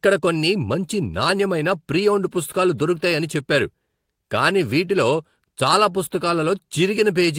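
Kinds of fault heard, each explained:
Nothing here calls for a fault label; the speech comes across without any technical trouble worth pointing out.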